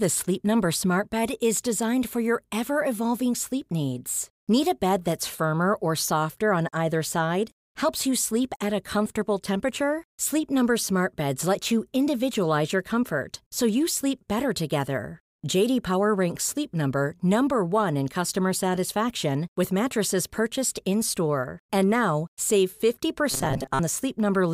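From 23.31 to 23.81 s the speech becomes a rigid metallic 134 Hz buzz, likely robotic sound from repeated short buffers of about 7.5 ms.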